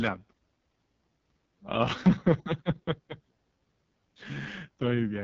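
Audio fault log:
throughout, AMR wideband (HD Voice) codec: the speech is rough and raspy, with heavy coding damage, and nothing is heard above about 7.6 kHz. The codec models the voice as pulses driving a vocal-tract filter only up to 6.4 kHz and fills the band above that with shaped noise, so the top end hisses rather than carrying detail. The strong rasp points to the lowest mode, around 6.6 kbit/s, where too few bits are left for the pulse excitation.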